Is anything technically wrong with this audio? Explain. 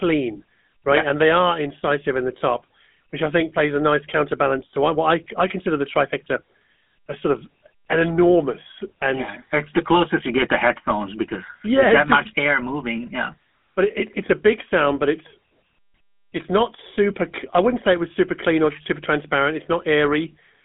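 Yes, the speech has gone through a GSM full-rate codec for the whole clip, and the damage is plainly audible. It sits in a narrow 200 Hz to 3.5 kHz band, so there's no real top end. The codec approximates the vocal tract with a simple filter and drives it with a sparse, evenly spaced pulse train instead of the real excitation. That's where the buzzy, gravelly grain comes from. The result is consistent with the old 13 kbps phone coding.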